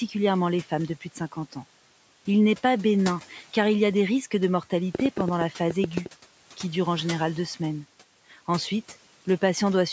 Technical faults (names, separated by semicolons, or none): speech cut by the noise suppressor; train of clicks